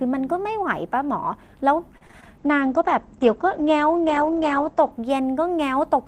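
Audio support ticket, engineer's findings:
Repeated packet loss (robotic sound), 1.97–2.34 s: choppy speech, four short dropouts patched by stretching the preceding sound, about a third of the span concealed, longest gap 37 ms. Component: network path / jitter buffer. Distinguishing trait: discrete holes with repeated-sound fill, not a steady loss of detail, so not an encoder-rate issue.

Call bitrate drop, 2.39–4.98 s: speech turns muffled and watery right after the dropouts. Encoder rate cut from 32 to 12 kbps, bottoming out for about 2.5 s, audio bandwidth narrowed from 20 kHz to 8 kHz. Component: Opus encoder following a falling bandwidth estimate. Distinguishing trait: continuous, gapless dullness and coarseness that lifts when the rate recovers, not the intermittent stutter of packet loss.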